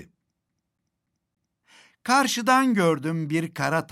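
From 0.49 s to 1.63 s the sound stutters, one slice of about 286 ms replaying four times with a brief mute at each jump. This is a CD stuck on one turn: a scratch kicks the laser back a track on every rotation.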